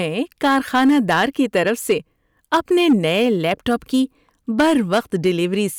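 Hard clipping runs through the whole of this speech clip, from start to finish. The signal was driven about 8 dB past what a stage in the chain could pass, so the loudest peaks are sliced flat. Only a small share of the waveform, around two percent, is cut, but those flattened tops throw harmonics high into the spectrum, heard as a gritty crackle riding each louder syllable rather than a constant fuzz.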